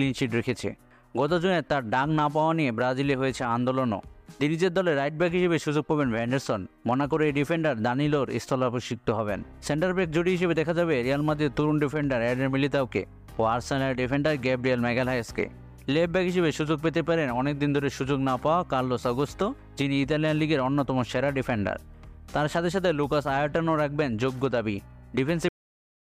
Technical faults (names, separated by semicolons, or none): cut-off end